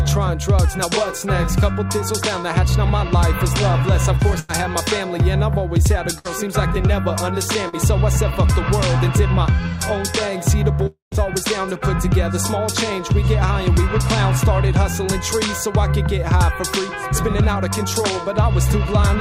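Packets went missing in a burst of packet loss at 4.39 to 4.51 s and again at 6.19 to 6.27 s. The receiver filled about 93 ms and then 59 ms by stretching the last sound into a fading buzz or hiss, and the audio resumes with 100 ms and 60 ms missing.

At 7.69 to 7.75 s, a short concealed packet loss left 39 ms for the decoder to fill from what came just before, blending back afterwards. This gives a brief smear, and 40 ms of the audio is lost.

From 10.87 to 11.14 s, the sound trails off into a fading continuation and then silence lasting about 140 ms. It resumes with 260 ms gone. The likely cause is a long network dropout: nothing arrived, so the receiver concealed 250 ms.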